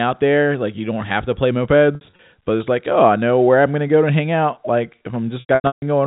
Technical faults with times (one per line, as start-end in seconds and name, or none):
1.95-2.19 packet loss with pitch repetition
5.40-5.82 packet loss with pitch repetition